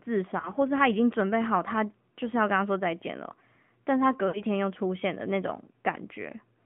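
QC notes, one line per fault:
throughout: AMR narrowband mobile codec. Sound is confined to about 150 Hz to 3.4 kHz with a buzzy, synthetic edge, as a pulse-driven vocal tract model rebuilds each frame at a low rate, which fits the 10.2 kbps mode. Unlike simple low-pass filtering, the timbre itself sounds rebuilt.
0.40–0.52 s and 4.28–4.43 s: lost AMR speech frames. The decoder repeats the last good pitch and vocal tract settings at falling gain, giving a brief warble at 0.40 s and a longer smeared fade at 4.28 s, which fits about three lost frames, before sound returns weak. It is a smear rather than a hard silent gap or click.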